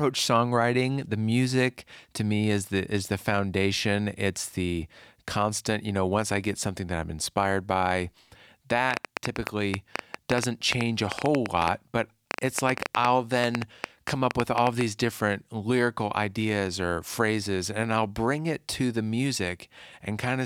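Something in the chain, likely electrical interference or a faulty connection or power supply, is injecting pulses into this speech clip: a train of clicks runs from 8.91 to 14.82 s, about 7.5 per second at an uneven pace. Around fifty similar pops rise about 20 dB above the speech, ending just before "different lyrical ideas or".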